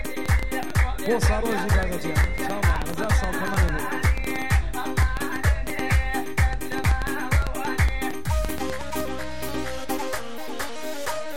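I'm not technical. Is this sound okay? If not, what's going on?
No. Throughout the recording there is sample clock jitter: the converter's timing wobbles by a few millionths of a second, so each sample lands slightly off. That adds a faint hiss or roughness that grows on loud, bright passages and disappears in silence.

From 0.05 s to 9.01 s there is a train of clicks, around seventy sharp ticks at about 7 per second, unevenly spaced and louder than the sound itself. This is likely interference from nearby equipment or a faulty connection or power supply.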